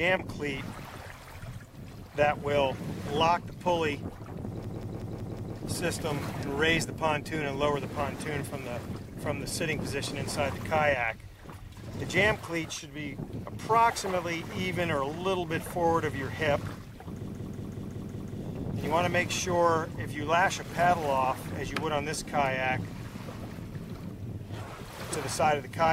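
Two system hang loops, at 4.64 to 5.57 s and 17.28 to 18.39 s, repeat one 185.8 ms piece of audio 5 and 6 times. That is a machine-gun stutter at about 5.4 Hz, consistent with a frozen driver replaying an 8192-sample ring buffer.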